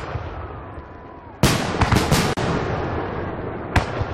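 From 0.75 s to the end, the sound carries a filter restarted on every block: each block starts from silence, so a small transient repeats at 100 Hz, which points to 10 ms blocks. Unlike steady mains hum, this buzz rises and falls with the signal's level. At 2.33 to 2.37 s there is a gap at a join of encoded pieces, a silence of about 36 ms left by encoder delay and end-frame padding when separately encoded pieces were joined. Unlike a dropout, which loses material, the sound resumes exactly where it stopped, with smeared edges.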